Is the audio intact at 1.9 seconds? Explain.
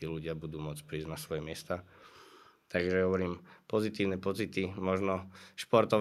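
No. From 1.85 to 2.05 s an echo leak adds a very faint copy of the speech, 162 ms late. This is likely loudspeaker sound that the far end's echo canceller missed. A spectrogram shows a weak, time-shifted repeat of the harmonic pattern.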